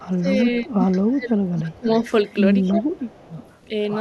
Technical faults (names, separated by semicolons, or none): speech suppressed in double talk; echo leak